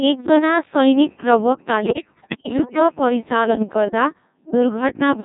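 Throughout, the speech passes through the Codec 2 vocoder at 1.6 kbit/s, heavily damaged: only pitch, voicing, energy and envelope survive, so the voice is rebuilt from sine waves and sounds buzzy and robotic. A spectrogram shows neat, comb-like harmonic stacks with smeared, blocky formants and no natural noise detail.

From 1.84 to 2.80 s, bit errors on digital voice radio corrupt the frame parameters at roughly 15 percent, which fits around two dozen damaged frames. Pitch, level and timbre jump frame to frame into bleeps and warbling gibberish, visible as abrupt harmonic shifts and erratic envelope steps.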